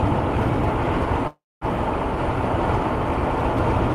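Packets likely stalled and the jitter buffer emptied, giving a call audio freeze from 1.27 to 1.64 s: a fading fill, silence, then resumption with nothing lost.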